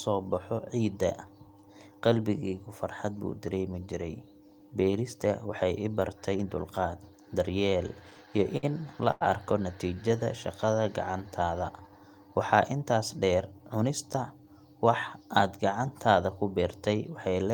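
Speech, and the receiver's jitter buffer struggles through the middle of it. From 7.59 to 8.65 s, packets kept arriving late, so the buffer ran dry eleven times in about one second. Each time the receiver carried the last sound forward, filling about 155 ms in all, with the longest hold 58 ms. The result is repeated stalls (stutter): the speech drags and catches, though nothing is lost. At 9.11 to 9.23 s a single late packet caused another short stall. The buffer emptied and the receiver stretched the last sound for about 99 ms until the packet arrived, then resumed from the same point, leaving one sound held too long and adding that much delay. From 9.95 to 11.18 s the buffer was low, so the receiver padded it by repeating single pitch periods and fragments of pauses, adding 105 ms. This jitter buffer slow-down plays the speech at 92% speed at unchanged pitch, drawing sounds out. Later, between 13.23 and 14.31 s, the buffer held more than its target, and the receiver trimmed short pitch-period pieces, roughly a tenth of a second in total. 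This jitter buffer speed-up runs the speech at 110% speed at the same pitch, so it sounds hurried.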